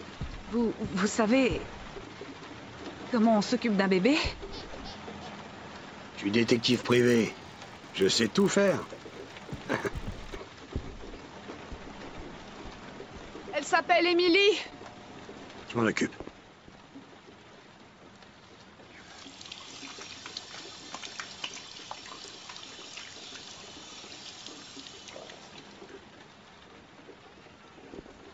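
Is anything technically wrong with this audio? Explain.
Yes. From 6.46 to 10.34 s there is a resampler restarted on every block. The audio was upsampled in 20 ms blocks, apparently from 16 kHz to 48 kHz, with each block converted on its own, so every block edge lacks its true neighbouring samples and carries a small error. At 50 edges per second this becomes a 50 Hz buzz riding on the sound and stopping when the signal does. A spectrogram shows thin vertical lines every 20 ms, and the waveform shows small kinks at each block boundary.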